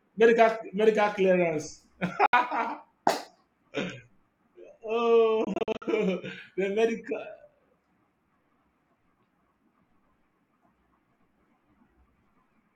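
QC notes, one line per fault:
2.26–2.33 s, Bluetooth dropout: the sound cuts to silence for about 70 ms, a gap that fits three lost packets. The likely cause is audio data failing to reach the headphones in time. Unlike an edit cut, no time is removed: the sound picks up where it would have been had it kept playing, so the gap is a hole in the timeline, not a splice.
5.44–5.82 s, Bluetooth dropout: a stuttering cluster of short silences rather than a single hole, adding up to about 186 ms missing over about 370 ms. The longest is 46 ms, and the pattern fits eight lost packets. This is likely a wireless link briefly struggling to deliver data. The interleaved fragments of surviving audio and the resumption at the correct point in time separate it from a clean mute or a repeated-buffer glitch.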